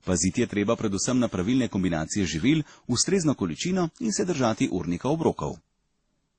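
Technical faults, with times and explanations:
Throughout, transcoding between lossy codecs: the speech stops at 9.5 kHz and carries mixed, layered coding artefacts. This is likely from successive low-rate encodes, fitting MP3, WMA, then Opus near 32 kbit/s, each encoder adding its own damage to the last.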